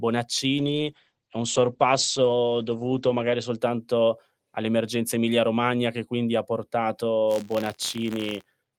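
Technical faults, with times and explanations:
0.59–3.65 s, call bitrate drop: the encoder's rate falls from 40 to 11 kbps and stays at its lowest for about 2.8 s. With so few bits, Opus codes coarsely and narrows the bandwidth from 20 kHz to 8 kHz, so speech turns muffled and rough.
7.27–8.78 s, buffer tearing: the writer and reader of the ring buffer cross inside each period, so a small sliver of every buffer holds audio from about 40 ms earlier, hard-joined at both edges. This yields an 86.1 Hz robotic buzz, which fits a 512-sample buffer.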